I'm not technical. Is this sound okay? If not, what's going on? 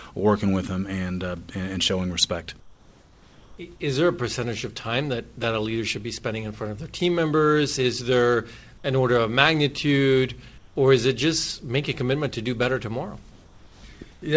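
No. Comfort noise in place of the background at 2.60–3.58, 10.58–10.76, 13.32–13.84 and 14.12–14.22 s: in these pauses the real room sound gives way to a slightly quieter, flat hiss, likely because the call system stopped sending audio and the receiver filled the gap with artificial noise.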